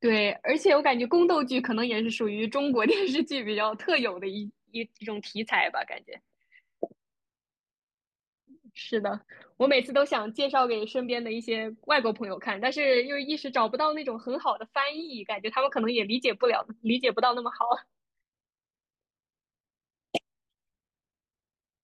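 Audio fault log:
No fault detected in this speech recording; nothing audible calls for a log entry.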